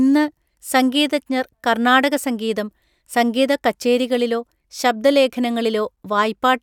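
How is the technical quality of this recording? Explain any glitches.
No technical faults are audible anywhere in this recording.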